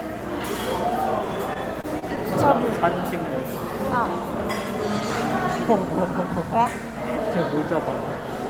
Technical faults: repeated packet loss (robotic sound)

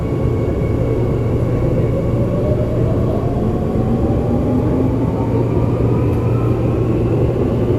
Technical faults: none

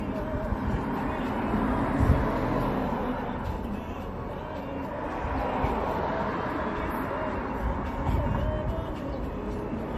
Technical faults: generation loss

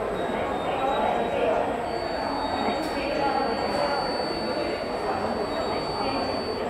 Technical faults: feedback whistle

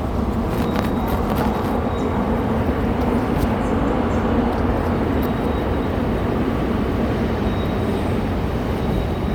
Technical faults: Bluetooth LC3 compression

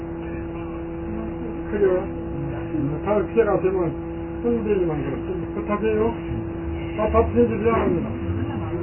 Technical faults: MP3 compression

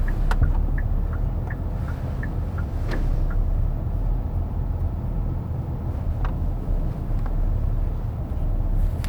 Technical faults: none

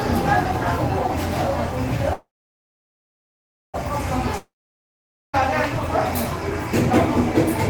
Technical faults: call audio freeze; long network dropout

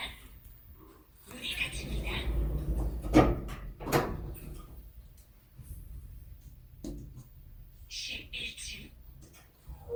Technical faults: generation loss

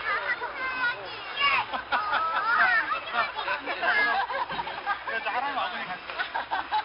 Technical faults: 4-bit ADPCM compression

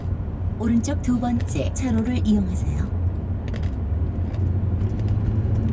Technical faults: none

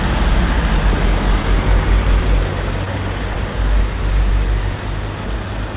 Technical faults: clock drift between sender and receiver; repeated timing corrections; scattered short gaps

